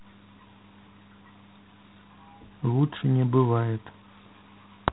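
It's a short speech clip with G.726 ADPCM coding damage from start to finish. The top end stops dead at about 3.9 kHz, so everything sounds boxed into a phone line. There's a harsh, rasping hiss riding along with the speech, getting louder as it gets louder. That's the codec storing only a few bits of difference from its own prediction for each sample, and the coarseness fits the 24 kbit/s mode.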